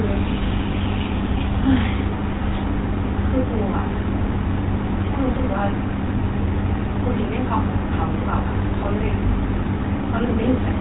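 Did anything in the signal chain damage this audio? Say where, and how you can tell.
Yes. Throughout the speech, the codec stage left the signature of the GSM full-rate codec: a plainly buzzy, gravelly roughness and nothing above 3.9 kHz, which fits a 13 kbps GSM full-rate encode. The codec models the vocal tract and drives it with regularly spaced pulses that keep only every third excitation sample. On a spectrogram there's a hard ceiling at 3.9 kHz with coarse, evenly spaced striations.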